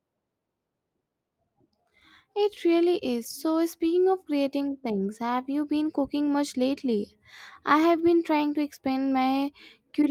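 Clock drift between sender and receiver runs through this whole speech clip. The sender's audio clock is slower than the receiver's, by something like one and a half percent, so the receiver's jitter buffer keeps draining faster than it refills. To avoid running dry, the receiver has to stretch the incoming audio rather than play it at its natural pace, and that produces a slight drag across the recording.

Repeated timing corrections run from 0.40 s to 9.86 s and are the result of that drift. Throughout this stretch, the receiver repeatedly repeats short slices of audio to stay in step with the slow sender. Every correction pushes the same way, lengthening the sound, but they land at uneven intervals. The speech plays at about 99% speed, with roughly 150 ms added in total.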